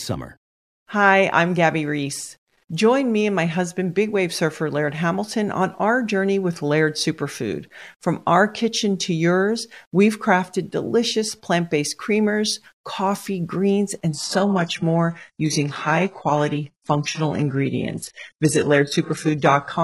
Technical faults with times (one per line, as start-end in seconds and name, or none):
14.09-19.83 adaptive stream at a lower bitrate